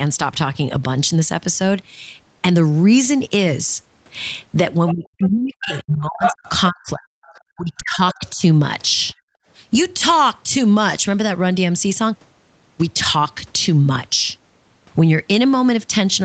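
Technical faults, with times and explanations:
4.87–5.28, 5.63–5.83, 6.23–6.49, 7.24–7.39 and 8.1–8.3 s: other side's voice leaking through. A second voice breaks through in short scraps, from far below the talker to about level with it, likely from loudspeaker echo the canceller missed.
4.93–8.42 s: speech suppressed in double talk. The talker's voice is pushed down in pieces, about 40 dB at its deepest, for roughly three seconds in total, likely because the canceller could not separate it from the overlapping loudspeaker echo.
9.14–9.46 s: background gated by the echo canceller. The room sound drops by about 36 dB for about 0.3 s, then returns as the canceller releases the microphone.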